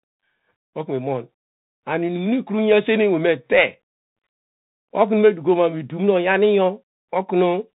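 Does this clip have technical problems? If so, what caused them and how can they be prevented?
Yes. Bluetooth CVSD headset codec damage runs throughout: the speech is band-limited with nothing above 4 kHz, sibilants turn scratchy, and a granular hiss sits underneath, which fits 64 kbps CVSD's one-bit up/down steps failing to track fast high-frequency detail. Prevent it by recording through a wired microphone or a wideband headset mode.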